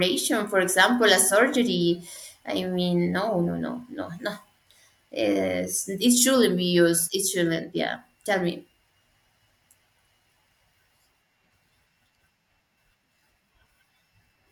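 At 6.16 s the speech is broken by a corrupt frame decoded, lasting until 6.19 s. A single compressed frame arrived with damaged bits, and the decoder played it anyway. Misread gains and codes put energy in the wrong parts of the spectrum for that short span. The result is a sharp blip, heard as a brief chirp or burst of noise. It is loud, peaking at about -5 dBFS, so it stands out clearly.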